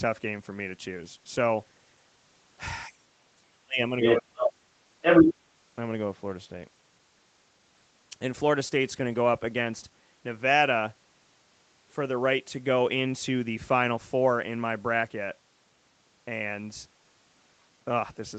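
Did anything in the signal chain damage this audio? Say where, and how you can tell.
Yes. Speech suppressed in double talk at 2.88–3.79 s and 4.27–4.76 s: the speech sinks by as much as about 40 dB, likely because the call's echo canceller ducked both talkers at once.

Other side's voice leaking through at 4.0–4.22 s, 4.39–4.53 s and 5.01–5.34 s: a second voice, as loud as the speech or louder, is likely echo that call processing failed to cancel.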